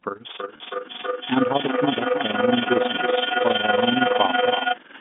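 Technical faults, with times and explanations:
Throughout, overlap-add ripple: the audio was split into windowed frames and rejoined with an overlap whose windows do not add up to a steady gain, so the level dips and recovers once per frame. Here the swing is about 11 dB at roughly twenty cycles a second, fast enough to fuse into a rough tremolo that gives the speech a robotic, fluttering edge from start to end.
0.4 to 4.86 s, feedback howl: a second device in the same room picked up the call's loudspeaker, so each trip from microphone to speaker and back added level instead of losing it. The repeats narrow to a high tone around 4 kHz and swell until the howl peaks about level with the speech. The loop takes roughly a third of a second per trip, and the howl holds until nearly the end.
0.56 to 0.60 s, packet loss with pitch repetition: about 40 ms of audio never arrived, which fits two 20 ms packets going missing. 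The receiver filled the gap by repeating the last pitch cycle, so instead of a hole there is a brief held, buzzy sustain of the speech.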